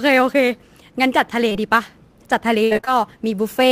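A short speech recording carries sample clock jitter from start to finish: the converter's timing wanders by a few microseconds, so each sample lands slightly off its ideal instant. The resulting error tracks the waveform's slope, leaving a faint roughness roughly 30 dB below the speech that swells on loud, bright syllables and disappears in pauses. Unlike a steady noise floor, it comes and goes with the signal itself. At 1.49 to 1.53 s and again at 1.53 to 1.57 s there is short concealed packet loss, two back-to-back holes of about 20 ms each. The decoder bridged them by extending the preceding sound and then blending back, which is heard as a brief smear or wobble rather than a click or dropout to silence. What separates it from the later fault is that it is an isolated pair of holes that recovers at once. Between 2.65 and 2.89 s the damage becomes repeated packet loss, giving a robotic sound. 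Holes arrive in quick succession, the longest about 62 ms, and patching covers more than half that stretch. The result is a choppy sound with fragments missing, a sustained degradation rather than one quick glitch.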